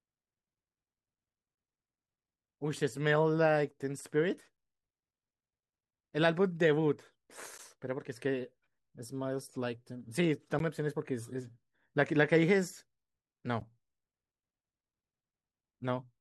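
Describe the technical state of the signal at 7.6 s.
A gap between chunks at 7.58 s: a join between 3-second chunks leaves 12 ms of silence, a brief hard-edged hole in the speech.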